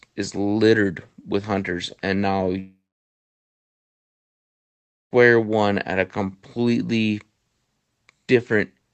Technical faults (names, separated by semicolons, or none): long network dropout